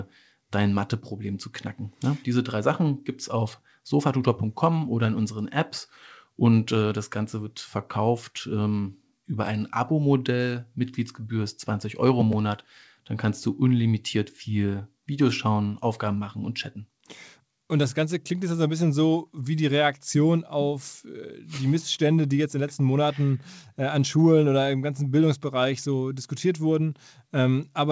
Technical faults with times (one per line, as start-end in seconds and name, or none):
none